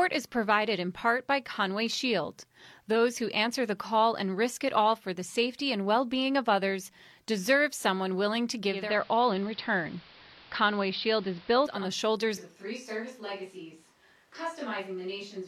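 At 8.63 s, just after "deserve someone willing to", the hybrid receiver lost its digital stream and cross-faded over about 374 ms to the station's AM broadcast, a digital radio blend to analogue. Until 11.95 s the speech carries hiss roughly 25 dB below it, though the level stays the same.

From 12.38 s to the end, the speech turns suddenly roomy and hollow, with thinner bass, a level drop of around 10 dB, and room noise about 30 dB below the speech. The likely cause is a switch to a distant microphone after the close one dropped out.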